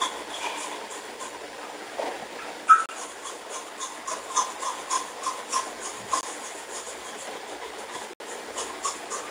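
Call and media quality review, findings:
Three short dropouts to silence, audio resuming where it left off. Bluetooth stall, likely RF interference holding packets up until the headphone buffer runs dry. 2.86 to 2.89 s, about 31 ms gap. 6.21 to 6.23 s, about 21 ms. 8.13 to 8.20 s, the longest at about 67 ms. Each one is a clean cut to silence while playback waits on resent packets, then picks back up.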